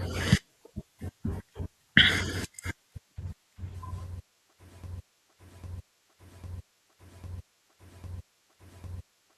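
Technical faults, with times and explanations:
4.84–9.38 s, broken-record loop: from 4.84 s to the end of the speech, one fragment about 0.80 s long plays six times back to back, each copy identical, so the cadence turns into a rigid, mechanical stutter that never moves forward. The likely cause is that the player, encoder or stream stalled and kept resending the last block it held. Whatever should have been heard in those final four and a half seconds is missing.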